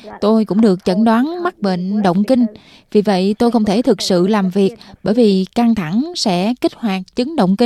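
Nothing in this speech recording points to a technical fault: the signal holds steady throughout, with no audible breaks, distortion or disturbances.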